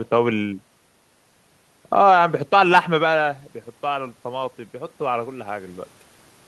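Around 3 s the talker moves and the voice level at the microphone falls by about 9 dB. From 3.83 to 5.85 s the automatic gain rises in response. The gain control reads the quieter input and lifts its gain by about 4 dB over roughly two seconds. The voice and the room noise swell together across that span, so the background audibly creeps up along with the speech.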